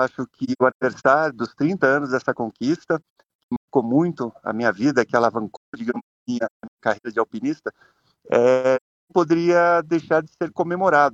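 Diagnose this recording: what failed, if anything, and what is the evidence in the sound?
Codec stage: AAC frame loss with muting. Soft-edged holes at 0.44–1.04, 3.01–3.68, 5.57–7.07 and 8.76–9.13 s, as zeroed frames fade through overlapping windows.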